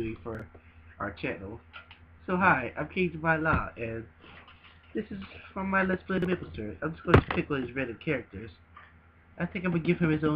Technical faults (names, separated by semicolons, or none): chunks out of order